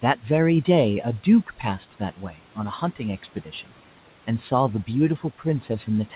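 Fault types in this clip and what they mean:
Speech cut by the noise suppressor: the suppressor mistook parts of the speech for background and turned them down with it, by up to about 12 dB at 2.17–2.57 s and 3.23–3.70 s and about 9 dB at 5.18–5.45 s, so those stretches sound swallowed and faint.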